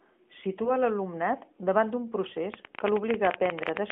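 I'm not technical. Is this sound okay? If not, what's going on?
No. At about 0.64 s there are lost AMR speech frames: one 20 ms piece of the mobile-phone signal failed to arrive intact, so the phone's decoder filled the gap by briefly stretching the preceding sound, heard as a short dip or warble lasting until about 0.71 s.

From about 2.54 s to the end there is a train of clicks: roughly twenty sharp ticks at an uneven pace of about 15 per second, loud enough to stand out clearly over the speech and pauses. The likely cause is electrical interference from nearby equipment or a struggling audio connection.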